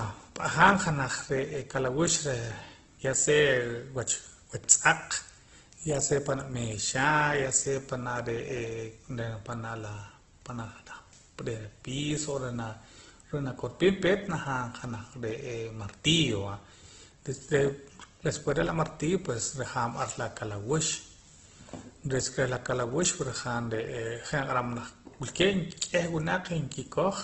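Opus compression runs through the entire recording: the speech carries heavy, grainy codec damage, and nothing is present above 8.1 kHz. The cause is likely Opus in its music (CELT) mode at a very low rate, which fits about 12 kbps. With too few bits, the encoder keeps each band's energy but fills the detail with folded or noise-like content, so the voice sounds rough and hissy rather than swirly, and the wideband limit removes the top.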